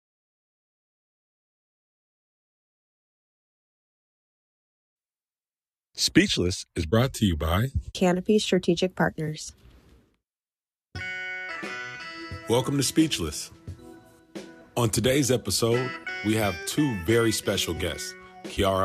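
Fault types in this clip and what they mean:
Nothing to flag here: no dropouts, glitches or other technical faults turn up anywhere in this audio.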